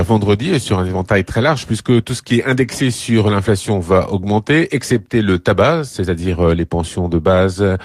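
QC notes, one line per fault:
Nothing stood out on listening to this speech recording.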